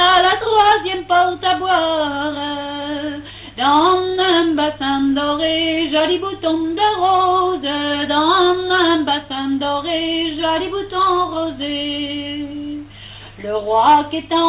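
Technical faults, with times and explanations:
No technical faults are present; the audio has come through a call path with nothing above 4 kHz, a band limit that fits narrowband G.711 mu-law coding at 64 kbps.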